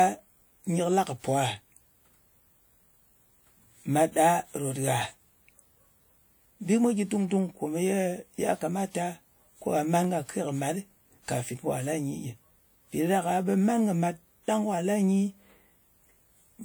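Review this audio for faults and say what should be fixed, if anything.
Three sharp single clicks land at 4.57, 10.04 and 13.54 s, each a thin vertical line across the spectrum. They're likely dropped samples: a fraction of a millisecond of speech goes missing and the waveform jumps straight to a later value. To prevent it, give the capture or transfer buffers more headroom.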